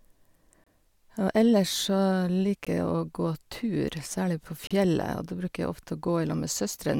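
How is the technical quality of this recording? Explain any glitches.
The speech is interrupted by three short dropouts, all gaps between stream segments: 0.64 to 0.67 s (about 27 ms), 2.65 s (about 17 ms), and 4.67 to 4.71 s (about 34 ms), just after "særlig på". Adjacent segment timestamps leave a small hole that the player pads with silence, repeating at the 2 s segment boundaries. Each one sounds like a brief hard tick of silence. On a waveform it is a flat, near-silent line with abrupt edges; on a spectrogram, a clean vertical blank band.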